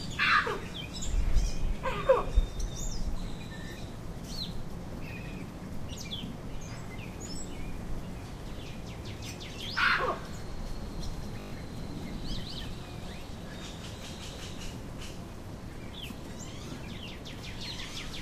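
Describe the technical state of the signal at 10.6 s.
At 10.6 s the signal is intact, with no audible fault at that moment.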